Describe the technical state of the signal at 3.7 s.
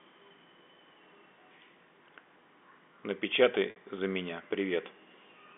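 At 3.70 s there's a packet loss with pitch repetition running to about 3.76 s. Roughly 60 ms went missing, which fits three 20 ms packets. The receiver loops the last pitch period, so you get a brief buzzy hold that fades toward silence before the speech cross-fades back in.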